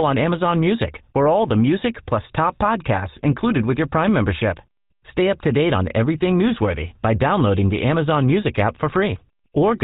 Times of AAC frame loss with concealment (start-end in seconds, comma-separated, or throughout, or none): none